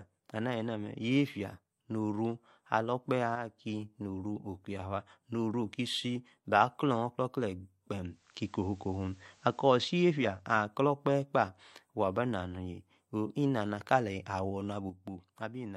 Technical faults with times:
3.36-3.58 one channel drops out
8.04-10.48 digital radio blending to analogue
14.90-15.76 one channel drops out

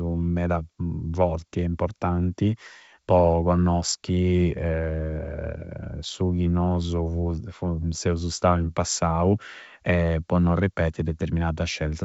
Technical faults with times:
none

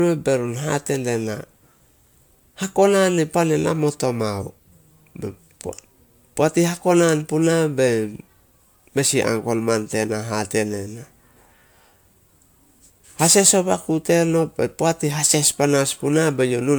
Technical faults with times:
0.00-16.78 generation loss

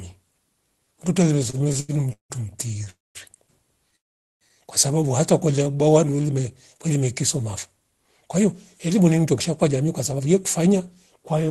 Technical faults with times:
1.43-2.32 repeated stalls (stutter)
2.84-2.88 short stall from a late packet
2.90-3.17 call audio freeze
3.96-4.43 call audio freeze
5.51-6.28 jitter buffer slow-down
7.77-11.50 jitter buffer speed-up

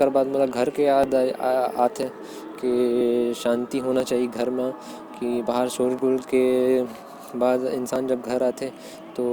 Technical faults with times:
1.03-8.94 periodic USB or driver dropouts

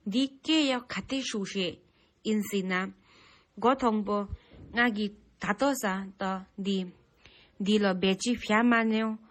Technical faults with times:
0.00-9.31 transcoding between lossy codecs

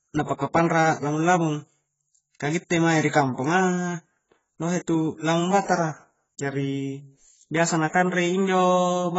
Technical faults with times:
0.00-9.18 AAC compression

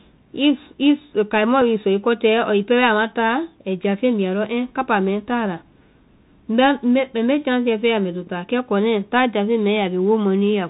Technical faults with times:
0.00-10.69 Bluetooth CVSD headset codec
1.61 Bluetooth headset packet repeated

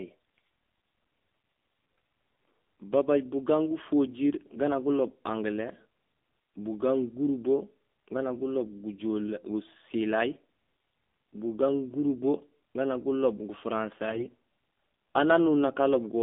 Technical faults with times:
0.00-16.22 AMR narrowband mobile codec
5.06-5.16 AMR bit errors
14.10-14.31 AMR bit errors

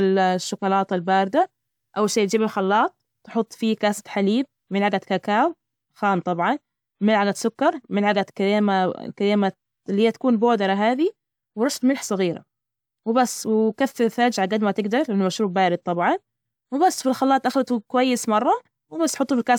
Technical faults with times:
none

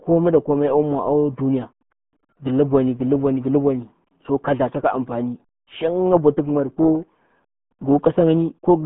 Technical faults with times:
0.00-8.86 RealAudio 14.4 codec

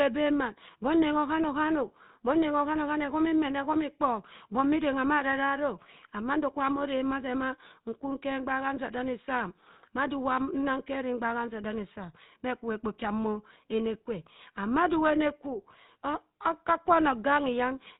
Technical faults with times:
0.00-18.00 GSM full-rate codec

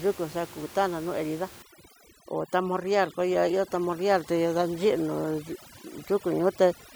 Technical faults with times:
1.62-6.96 overdone noise removal

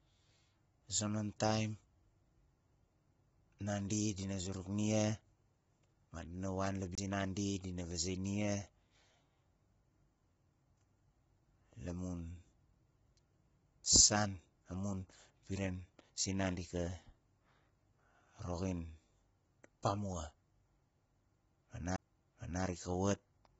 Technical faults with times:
0.00-23.59 low-delay AAC compression
6.95-6.98 CD skip
21.96 CD skip

